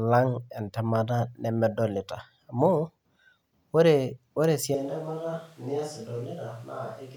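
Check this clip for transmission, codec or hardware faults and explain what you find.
One fault shows up. From 4.75 s to the end, the speech suddenly turns roomy and hollow, thinner in the bass, roughly 5 dB quieter, with room noise more noticeable. That's likely a switch to a distant microphone after the close mic's signal dropped out.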